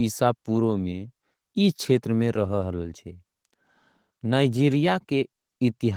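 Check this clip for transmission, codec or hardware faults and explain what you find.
No faults turn up anywhere in the speech: the signal stays continuous and steady throughout, with nothing in its level, timing or frequency content that points to trouble in the chain that carried it.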